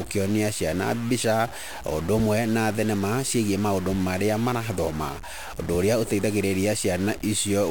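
All the way through the speech there's a harsh, buzzy edge riding on everything, and the pauses aren't quiet but fill with a gritty noise floor. That's the signature of a stuck bit: one data bit is most likely jammed at a fixed value, so roughly half the samples land off by a step of about -35 dBFS, in a pattern that follows the waveform, and small values near silence flip around it.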